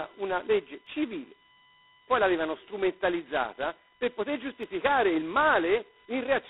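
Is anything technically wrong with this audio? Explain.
Yes. Three problems are present.

A USB whine sits under the speech for the whole clip, a fixed-pitch tone built on 1 kHz and strongest at its fifth harmonic, 5 kHz, at about 35 dB below the speech. It comes from the USB bus drawing current in 1 ms frames, and that current ripple is getting into the audio path through the shared power or ground. Because the pitch never moves with the speech, it reads as a steady electrical whistle rather than part of the recording.

The whole clip also carries heavy G.726 ADPCM damage at 16 kbit/s, the lowest rate of that codec. At this rate each sample is coded as only two bits of difference from a predicted value, so the prediction error comes through as a coarse, rasping hiss that rises and falls with the speech level. The band is held to telephone width, about 250 Hz to 3.7 kHz, with nothing above 3.9 kHz, which gives the voice a thin, boxed-in quality.

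There are two brief underruns with held sample. The first is at 0.87 s, just after "una legge", and lasts about 1.5 ms. The second is at 4.63 s, after "l'avevano strumentalizzata per poter", and lasts about 1 ms. In each case the output buffer ran dry and the converter held its last sample value, which flattens the waveform for that moment. The first gap is 64 samples long. Roughly the same span of live audio was lost each time.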